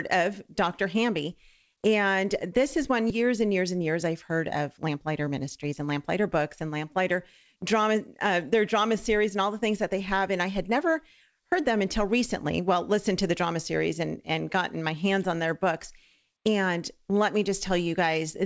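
At about 3.1 s there is a skip ahead: roughly 0.7 s of audio was discarded while later audio was already queued, so playback jumps forward with no silent gap. Unlike a dropout, nothing goes quiet. The two sides are butted straight together, and the only cue is the abrupt discontinuity.

From 4.89 to 7.12 s, and again from 7.56 to 9.36 s, comes a jitter buffer speed-up. An overfull buffer trimmed many short pitch-period slices in succession to cut the delay, running the audio at 107% and then 106%. About 0.15 s and 0.1 s are removed. It sounds hurried, but the pitch stays put, which separates it from a resampling error. The G.722 call path at 64 kbps limits content to below 8 kHz.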